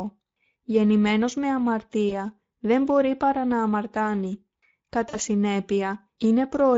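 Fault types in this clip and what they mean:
Speex codec: The speech was squeezed through the Speex CELP codec at a setting consistent with about 16.8 kbps, a middle setting that leaves the excitation coarsely coded. The damage is plainly audible throughout as a noisy, hoarse edge on the speech. Any content above 4 kHz is no real detail, only a shaped noise-like fill.
VoIP packet loss concealed by the speech codec: Audio packets went missing and the decoder filled each gap by extending its last pitch and filter settings while lowering the level. It happens twice. A 20 ms gap at 2.09 s comes right before "δεν μπορεί παρά να", and a 40 ms gap at 5.09 s is the other. Each is a brief stretch of extrapolated, fading sound, and the speech stays weak or distorted just after as the decoder recovers.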